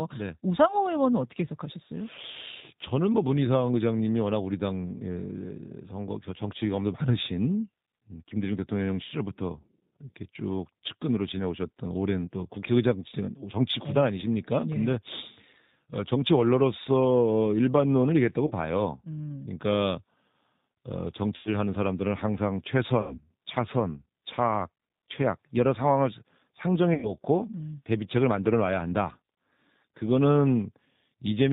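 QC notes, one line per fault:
Throughout: G.729 codec. The speech is band-limited with nothing above 4 kHz, and it has a rough, slightly synthetic edge from being rebuilt out of a filter, pitch predictor and sparse pulses at 8 kbit/s. Unlike plain low-pass filtering, the timbre itself sounds manufactured.
18.47–18.52 s, 21.36–21.49 s, 23.01–23.21 s, 26.94–27.12 s: VoIP packet loss concealed by the speech codec. The first gap covers about 30 ms and the other three about 90 ms, which fits one and then three lost 30 ms packets. The decoder stretches its last pitch and filter into a fading sound, and the voice stays weak briefly after each gap. That lingering recovery, rather than an abrupt silence or click, marks it apart from simple dropouts.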